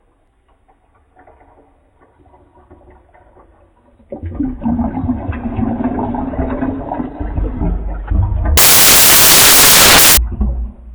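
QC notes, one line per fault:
8.57–10.17 s: samples built from the wrong bytes. Misassembled bytes make the low bits dominant, so loud broadband noise replaces the sound rather than merely distorting it, as clipping would.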